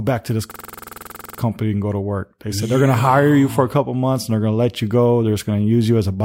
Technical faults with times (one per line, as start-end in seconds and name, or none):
0.51-1.39 system hang loop